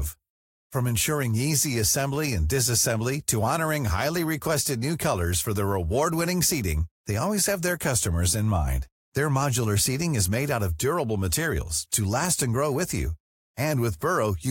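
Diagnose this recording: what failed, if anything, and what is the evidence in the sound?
Nothing failed in this recording, and no stage from the wiring through to playback has left a mark on the speech. There is no audible evidence of any fault.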